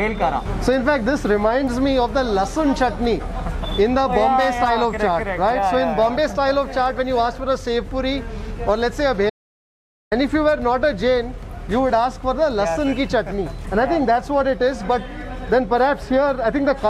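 At 9.30 s the sound cuts off abruptly into dead silence, with no room tone underneath, and resumes mid-flow at 10.12 s. This is an audio dropout to silence, about 0.82 s of material lost, likely from the input briefly disconnecting while silence kept being written.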